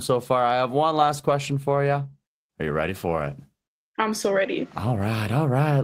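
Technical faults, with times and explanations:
Nothing technical stands out here; the speech comes through without any faults to point to.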